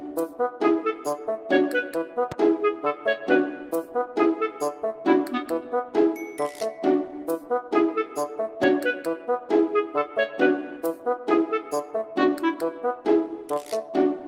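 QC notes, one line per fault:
2.32–2.34 s and 8.63–8.66 s, loud pop: a sudden electrical step or pulse, likely from a plug, switch contact, static discharge or driver glitch, has been added to the signal twice, once at each time. Each is a single sharp pop lasting roughly 24 ms and peaking about 10 dB above the surrounding sound. The circuits after it shape the pulse, and the sound carries on underneath.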